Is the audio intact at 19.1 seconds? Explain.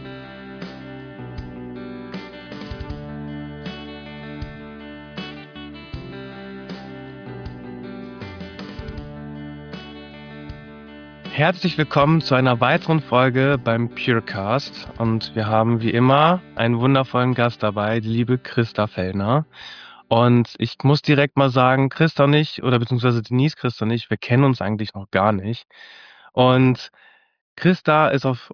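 Yes, the audio is intact at 19.1 seconds, with no fault to be heard at that moment.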